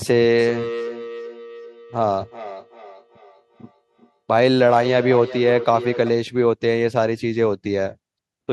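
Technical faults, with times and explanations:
0.38 to 6.22 s, feedback echo between two devices: the speech keeps returning roughly every 0.4 seconds, at its loudest about 12 dB below the original. A second device in the same room on the same call is playing back this microphone's signal, and the microphone picks that playback up and sends it round again. Each device's echo canceller removes only its own output, so the returned copy passes through with a thin, ringing colour.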